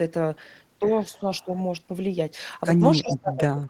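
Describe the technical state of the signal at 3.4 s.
At 3.4 s the speech is pulled down by up to about 20 dB, from 2.94 s to the end, likely speech suppressed in double talk by an echo canceller.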